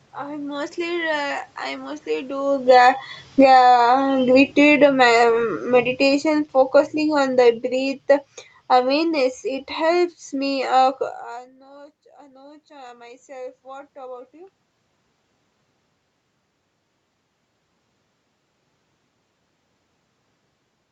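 From 0.84 s to 11.01 s the speech sinks steadily, about 20 dB in all, as automatic gain falling takes hold. The gain control judged the input too loud, or its background noise too strong, and kept lowering its gain. What separates this from a talker simply moving, which also happens around 2.5 s, is that the room noise drops right along with the speech. A change at the microphone would leave the background where it was.

Then, from 11.28 s to 14.62 s, comes automatic gain rising. Around 11.0 s the talker moves away and the input falls by about 24 dB, so the control slowly raises its gain again, about 7 dB over more than three seconds. Speech and background swell together, and that shared swell marks it as the gain control rather than the talker returning. It also recovers far less than the drop it follows. Throughout, the Opus call path leaves nothing above 8 kHz.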